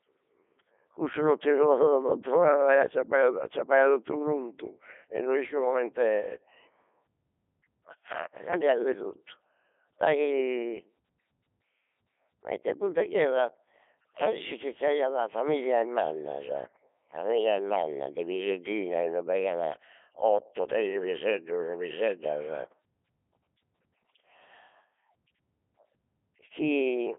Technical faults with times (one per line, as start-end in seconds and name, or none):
0.00-27.19 Codec 2 vocoder